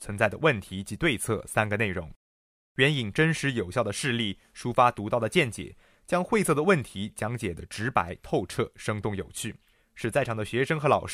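No technical faults are audible anywhere in the speech.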